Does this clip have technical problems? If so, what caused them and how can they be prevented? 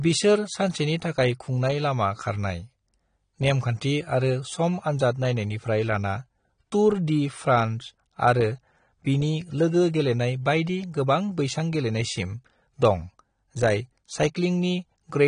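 Yes. AAC compression throughout: nothing above 9.7 kHz and audibly smeared, warbling sibilants, likely from low-bitrate AAC-LC, which fits about 32 kbps. Encode at 96 kbps or higher to prevent it.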